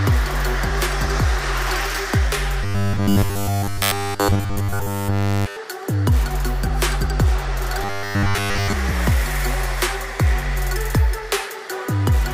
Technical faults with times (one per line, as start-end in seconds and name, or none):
2.64-5.58 robotic sound from repeated short buffers
7.83-8.73 robotic sound from repeated short buffers